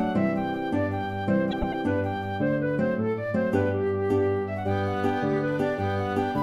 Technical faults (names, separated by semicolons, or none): frames out of order